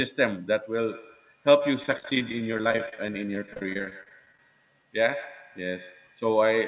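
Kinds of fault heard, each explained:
Feedback echo between two devices: From 0.91 s to the end, a second device in the room replays the far side and its mic sends it back, so the sound returns roughly every 150 ms, thinner and ringier each pass, peaking about 15 dB under the speech.
Repeated packet loss (robotic sound): Between 1.83 and 4.39 s, packets keep dropping, and each hole, none longer than 32 ms, gets patched by stretching the last bit of sound. About a quarter of that stretch is filler, so it turns choppy.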